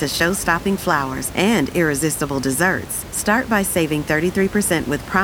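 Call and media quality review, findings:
No findings in this call and media quality review; the room noise sits about 15 dB below the speech.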